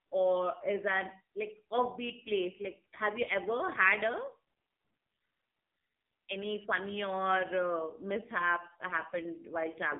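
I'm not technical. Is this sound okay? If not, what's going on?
No. The AMR narrowband mobile codec is audible throughout: the speech went through an old-style phone coder that keeps nothing above about 3.6 kHz and rebuilds the voice from a simple model at a very low data rate, so it sounds muffled, buzzy and synthetic.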